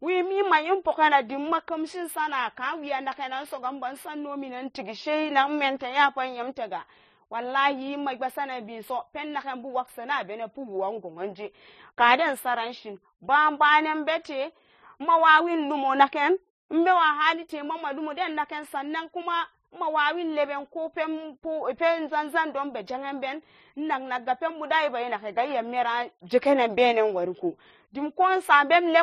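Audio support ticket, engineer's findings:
Transcoding between lossy codecs, throughout the speech. Two sets of codec artefacts heard together; nothing above 14.9 kHz. Likely chain: low-bitrate HE-AAC re-encoded to low-bitrate MP3. Final encoder spent bits on inherited artefacts, added its own, kept the lowest bandwidth in the chain.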